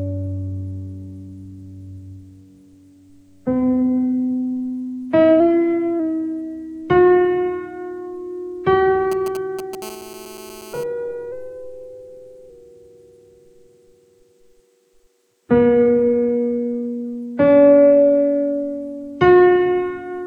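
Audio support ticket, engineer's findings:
Drift correction step, 5.40–6.00 s and again 11.32–12.50 s: sudden speed-up of 5.57% with pitch raised 93.8 cents, roughly a semitone, then release. Likely a clock-sync resampler stepping its rate to rebalance its buffer. Spectrogram shows all partials shifting upward in a block; the waveform looks time-compressed.

GSM signalling bursts, 9.12–9.83 s: galloping dit-dit-dit of short 217 Hz buzzes at around -15 dB relative to the signal. A nearby 2G handset's intermittent radio bursts are rectified in the analogue path. Spectrogram shows clustered vertical striping across many harmonics; the waveform shows grouped spiky packets.

GSM phone buzz, 9.83–10.84 s: steady raspy buzz at 217 Hz, about -20 dB relative to the signal, unrelated to the sound. A handset in an active call pulses 217 times a second, and the circuit rectifies it. Spectrogram shows an even comb of 217 Hz harmonics; the waveform shows a regular pulse train.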